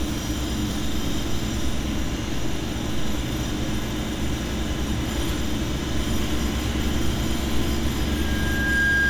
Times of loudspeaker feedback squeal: 8.09-9.09

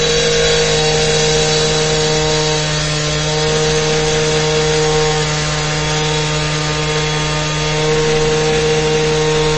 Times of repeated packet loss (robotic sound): none

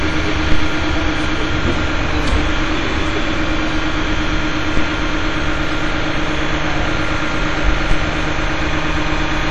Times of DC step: 0.52, 4.77, 7.91

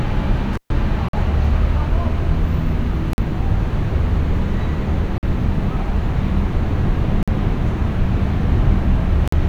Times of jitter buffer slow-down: none

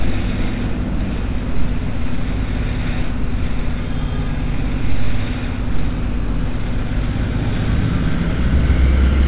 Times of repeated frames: none

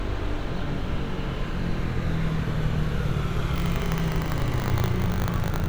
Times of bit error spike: none

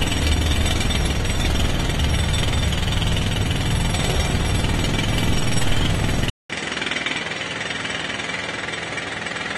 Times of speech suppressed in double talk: none

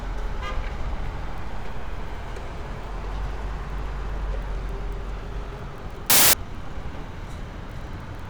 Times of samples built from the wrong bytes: 6.10-6.33

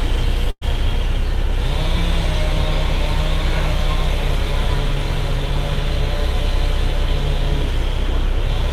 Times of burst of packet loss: 0.50-0.64

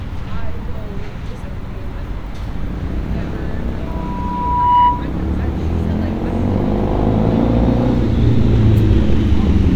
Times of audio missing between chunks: none

